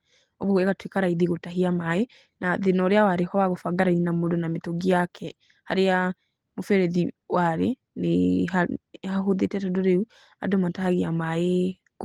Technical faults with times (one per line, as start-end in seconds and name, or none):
none